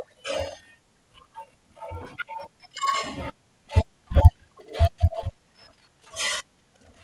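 Resampler restarted on every block, throughout the speech: each 50 ms block was upsampled in isolation, which fits a 24 kHz to 48 kHz conversion, so every edge lacks its true neighbouring samples. That leaves a 20 Hz ticking buzz heard only while signal is present.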